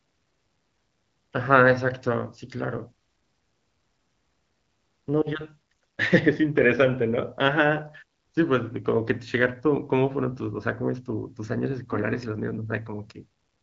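No technical faults can be heard in this speech.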